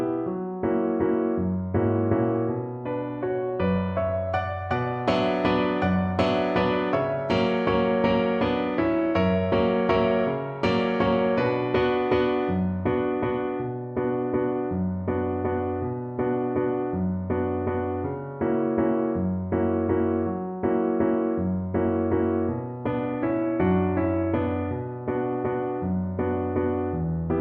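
Nothing in the audio stood out as a technical fault on listening.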